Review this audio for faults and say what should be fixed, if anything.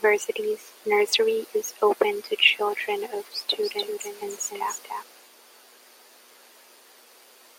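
From 3.63 to 5.03 s, after "open to children of", a doubled audio track: a copy about 5 dB quieter trails by roughly 300 ms, likely from a second capture path. Route the source through a single capture path.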